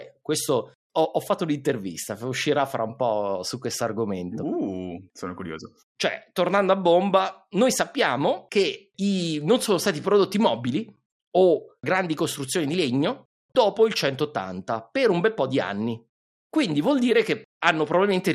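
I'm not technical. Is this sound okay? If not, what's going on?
No. The speech was likely squeezed too hard by MP2 compression, which splits sound into narrow frequency bands and drops or crudely rounds off the ones it can't afford. From start to finish, the voice sounds dull and muffled, with a gurgling, grainy roughness that flickers in and out.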